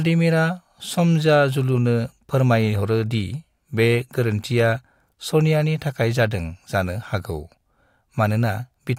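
No technical faults can be heard anywhere in the speech recording.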